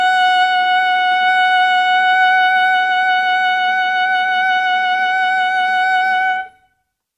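Nothing in this music clip stands out as a technical fault; it just runs along without any glitch worth pointing to.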